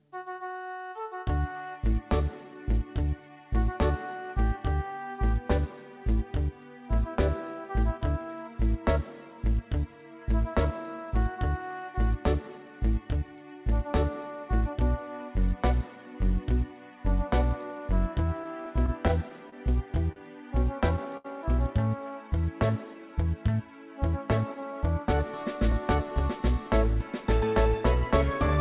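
Between 18.44 and 19.54 s the audio hits a run of repeated stalls, basically a stutter. Packets were showing up late or trickling in slower than playback, so the jitter buffer kept draining, six times in that stretch. Each time the receiver held the last bit of sound going until data caught up, patching about 83 ms in total with the longest hold around 27 ms. Nothing is actually lost, but that second or so drags and hiccups. Right after, there are two separate short stalls from late packets, one at 20.12 to 20.18 s and another at 21.17 to 21.26 s. In each case a single packet wasn't there when it was due, so the receiver stretched the previous sound by 38 ms and then 72 ms before picking up exactly where it left off. You hear a sound held a touch too long, with a faint buzz or dip. Then from 24.41 to 25.96 s there's a jitter buffer speed-up. The buffer had built up more audio than it wants, so the receiver trimmed out short pitch-period-sized slices over and over, roughly a tenth of a second altogether. 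Playback runs at about 107% speed with the pitch unchanged, so it comes across as slightly rushed. The whole thing has that narrow telephone band with nothing above 4 kHz, which fits G.711 mu-law at 64 kbps on a WebRTC call path.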